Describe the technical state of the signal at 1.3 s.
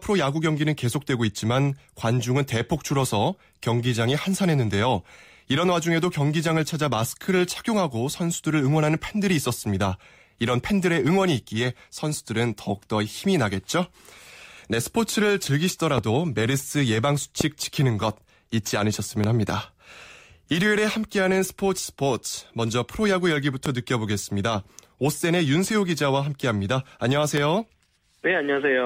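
At 1.3 s the speech signal is intact, with no audible fault at that moment.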